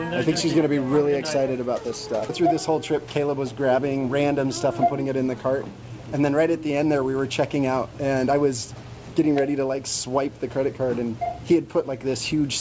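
Nothing here needs fixing; the sound came through a normal call path that carries nothing above 8 kHz, as that codec does, and no faults turn up anywhere along the way.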